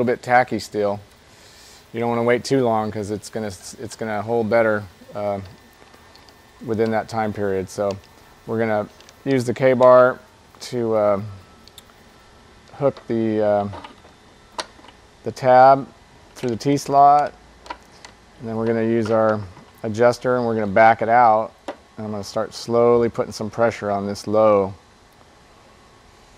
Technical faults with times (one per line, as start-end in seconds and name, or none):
none